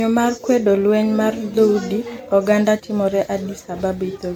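Throughout this speech recording the sound has a swirling, hollow quality, with smeared consonant attacks and a watery shimmer that builds beyond what a single lossy pass would leave. This is generation loss, likely from repeated MP3 coding, around seven rounds of decoding and re-encoding at a rate that fits 96 kbit/s. Each pass quantised on a shifted frame grid, so noise and spectral gaps accumulated. Content stops just below 19.9 kHz.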